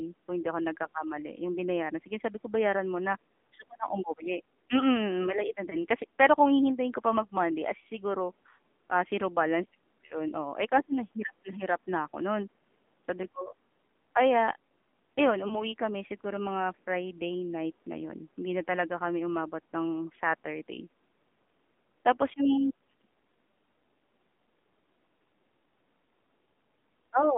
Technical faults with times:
0.00-27.37 AMR narrowband mobile codec
5.70-5.77 lost AMR speech frames
10.06-10.20 lost AMR speech frames
15.48-15.65 lost AMR speech frames

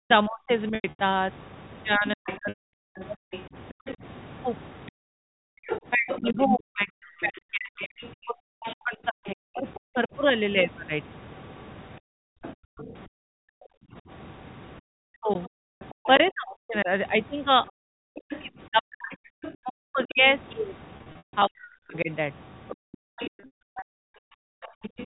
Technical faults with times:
0.00-23.97 speech suppressed in double talk
0.75-0.99 packet loss with pitch repetition
2.26-25.06 other side's voice leaking through
2.49-2.72 packet loss with pitch repetition
4.91-5.65 background gated by the echo canceller
12.00-14.02 background gated by the echo canceller
15.72-15.81 packet loss with pitch repetition
20.97-21.33 packet loss with pitch repetition
22.75-24.90 background gated by the echo canceller
23.40-23.82 packet loss with pitch repetition

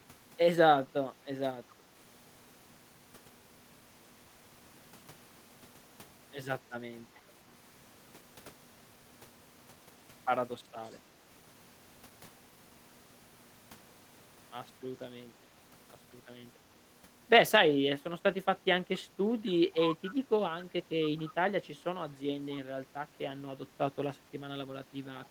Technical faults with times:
1.69-1.73 echo leak
10.85-10.95 echo leak
21.01-21.34 echo leak
25.25-25.29 echo leak

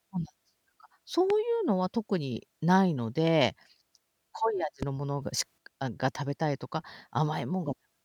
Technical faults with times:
1.30-1.32 loud pop
4.83-4.85 loud pop
5.22-5.58 sudden gain jump

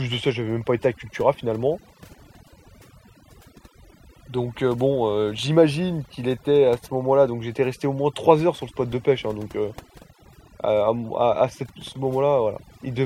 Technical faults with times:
0.00-13.06 overdone noise removal

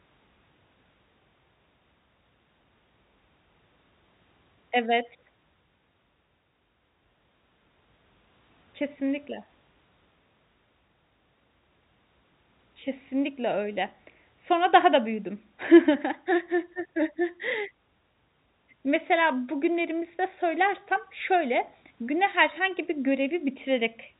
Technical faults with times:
none

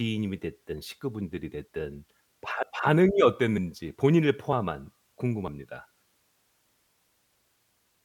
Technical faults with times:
2.63 audio missing between chunks
3.58 audio missing between chunks
4.53 audio missing between chunks
5.48 audio missing between chunks

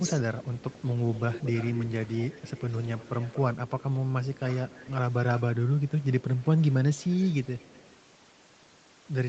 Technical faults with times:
0.00-0.19 speech suppressed in double talk
0.05-3.83 echo leak

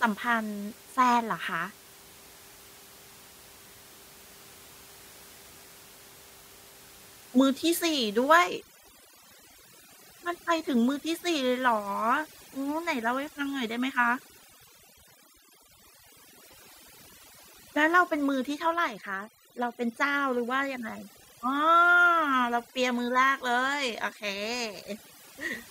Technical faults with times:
8.39-25.70 overdone noise removal

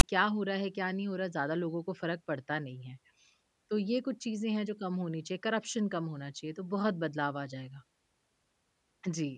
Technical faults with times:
0.00-0.03 file tags played as audio

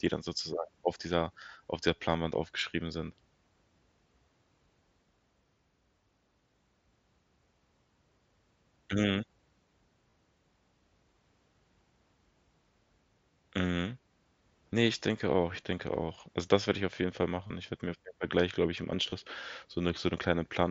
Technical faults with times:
10.11-10.13 concealed Bluetooth headset packet loss
17.47-17.50 concealed Bluetooth headset packet loss
19.10-19.12 concealed Bluetooth headset packet loss

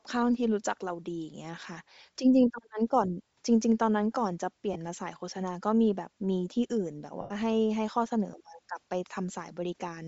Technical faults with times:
0.00-10.07 Bluetooth LC3 compression
4.73-4.76 lost LE Audio frames
7.21-7.32 lost LE Audio frames

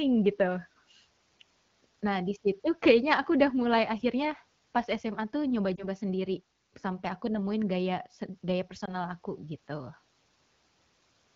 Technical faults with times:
5.76-5.87 lost AMR speech frames
8.85-8.92 lost AMR speech frames

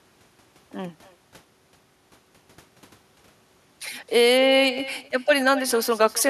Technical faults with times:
0.00-6.30 echo with no canceller

